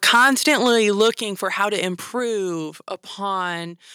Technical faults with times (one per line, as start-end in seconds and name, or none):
0.06-1.08 microphone overload
0.16 microphone volume stepped down
1.17 microphone volume stepped down